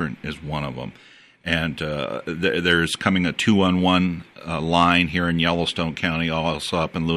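No technical faults can be heard in this recording.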